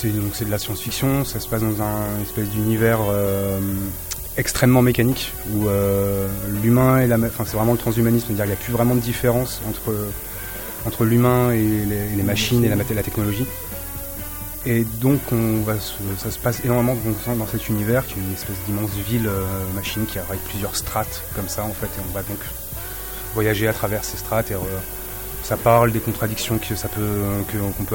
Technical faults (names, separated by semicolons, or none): low bit depth with noise shaping